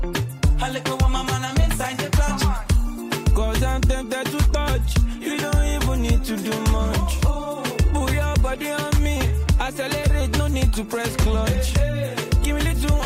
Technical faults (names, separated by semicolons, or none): none